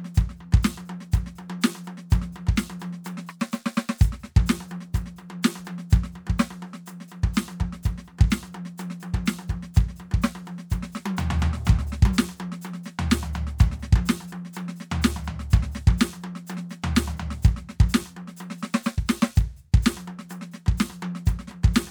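No faults are audible anywhere in this music clip.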